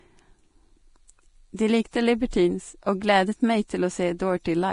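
Right from the start and for the whole clip, the speech carries heavy Vorbis compression damage, most likely from a low-bitrate encode, something around 30 kbps by the sound of it. Everything above about 10.6 kHz is simply gone, and the treble that remains has been quantised so coarsely that its fine detail turns into a grainy, hissy wash. Consonant attacks smear and voiced tones take on a rough edge.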